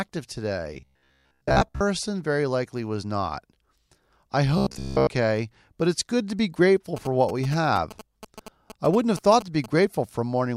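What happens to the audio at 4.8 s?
From 4.58 to 5.10 s the speech turns into a robotic sound from repeated short buffers. It becomes a rigid, metallic buzz at about 66.8 Hz that still loosely follows the speech. That pitch points to a repeated slice roughly 15 ms long. The likely cause is audio arriving too slowly. The playback fills the gaps by looping its last short buffer, while most of the real audio in that span is skipped.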